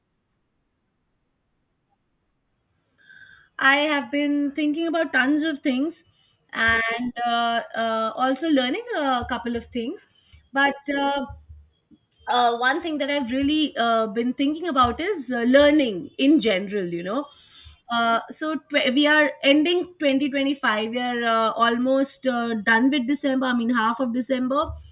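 No technical faults can be heard in this speech recording.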